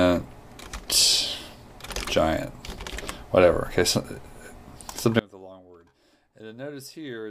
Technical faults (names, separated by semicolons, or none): audio dropout to a faint residue